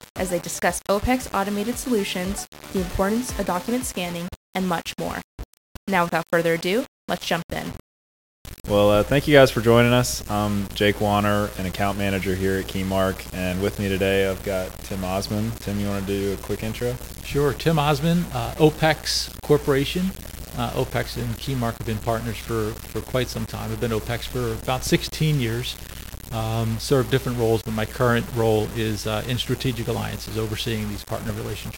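Low bit depth without dither runs throughout: grainy distortion that tracks the sound, likely from rounding to about 6 bits, leaving error roughly 15 dB below the signal.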